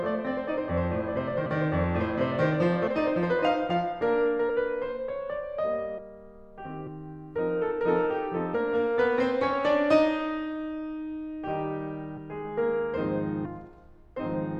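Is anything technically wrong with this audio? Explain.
Yes. The music has compressed frames skipped at 1.45, 2.86, 4.48, 5.97, 6.86, 8.53, 12.16 and 13.44 s. Missing or rejected frames make playback jump ahead, from about 70 ms up to about 0.7 s. The jumps fit whole frames of roughly 26 ms.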